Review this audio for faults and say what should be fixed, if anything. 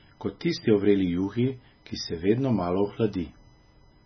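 A steady, fixed-pitch whine runs under the speech for the whole clip, built on 1 kHz with its strongest component at 9 kHz, roughly 35 dB below the speech. This is USB whine: current drawn in 1 ms USB frames leaks into the audio path through shared power or ground, producing a tone locked to that frame rate and its multiples. To prevent it, use a powered hub or ground-loop isolator, or move the interface to a cleaner USB port and power supply.

The speech also sounds watery and swirly throughout, with nothing above 6 kHz, so sibilants are dull. This is likely heavy MP3 compression at a very low bitrate, around 17 kbps. The encoder cut the treble and dropped weak frequency lines that flicker between frames. To prevent it, record and deliver in a lossless format, or encode at a much higher bitrate.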